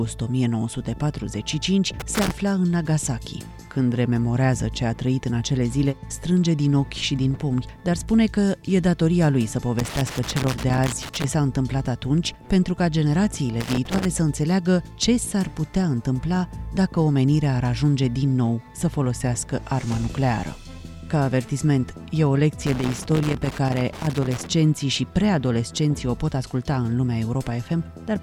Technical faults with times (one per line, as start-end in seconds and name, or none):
2.00-2.31 loose connector crackle
9.79-11.24 loose connector crackle
13.61-14.05 loose connector crackle
22.67-24.47 loose connector crackle